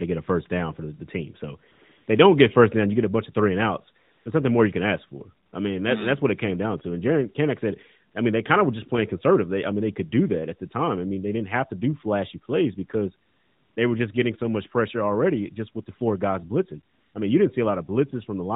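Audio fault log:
1.72–2.08 s, 4.04–4.26 s, 5.46–5.52 s, 8.12–8.14 s, 13.26–13.76 s, 16.94–17.14 s: AMR comfort noise. In each gap the real background gives way to a smooth, even hiss that switches on and off abruptly. The longest gap runs 500 ms and the shortest 20 ms. The sender judged the talker silent and stopped sending speech frames. The receiver then filled the pause with synthetic noise built from a rough level-and-spectrum description, and the narrowband mobile codec carries the speech around these gaps.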